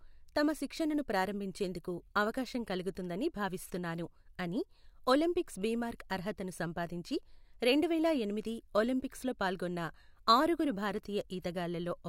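No technical faults turn up anywhere in this recording; the speech simply runs along without a single dropout, click or glitch to point to.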